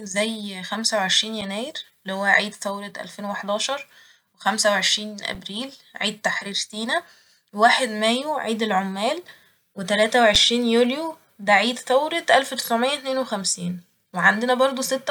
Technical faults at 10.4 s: underrun with held sample

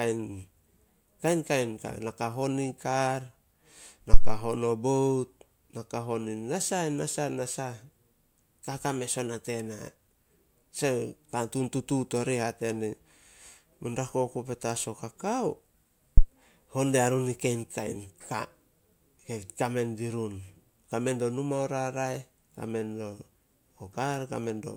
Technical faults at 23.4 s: none

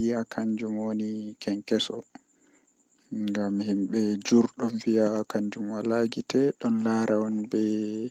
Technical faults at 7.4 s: none

